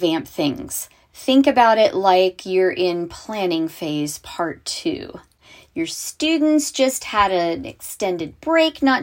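No technical faults can be heard anywhere in the speech recording, and the signal holds steady throughout.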